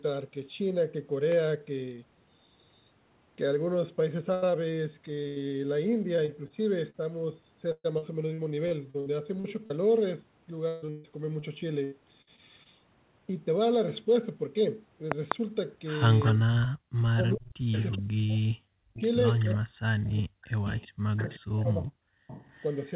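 At 1.32–1.34 s there's a loud pop, a single sharp click peaking about 10 dB above the speech, which keeps going underneath. It's likely a voltage spike from a switch, plug or static getting into the signal path.

Then come two bursts of packet loss, at 4.34–4.44 s and 5.28–5.38 s. About 80 ms goes missing each time. The receiver stretches the last bit of sound and fades it out, so you get a brief held buzz or hiss before the audio jumps ahead.

Repeated packet loss takes over in three stretches: 6.16–6.96 s with four small gaps (longest 38 ms), 7.72–9.72 s with eight (longest 123 ms), and 10.68–12.67 s with eight (longest 142 ms). Each gap gets patched with continued sound, so these passages sound choppy and robotic with chunks missing, worst in the last one.

At 15.12–15.34 s a second loud pop hits as two quick thumps, roughly 20 dB over the speech, again pointing to an electrical transient.

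From 16.25 s a speakerphone starts leaking. Echo leak shows up at 16.25–16.68, 17.33–17.98, 18.96–19.51, 20.65–21.37 and 22.28–22.75 s. It's a delayed copy of the talker coming back 376 ms late, about 10 to 20 dB below the speech. The likely cause is an echo canceller that didn't fully remove its loudspeaker pickup.

Overlapping that, speech is suppressed in double talk at 16.33–16.54 s (down about 25 dB), then 17.13–20.46 s and 21.03–22.35 s (dips of up to about 40 dB). When both sides talk at once, the talker's voice ducks, dulls and drops out in pieces. That's likely the canceller clamping down on everything.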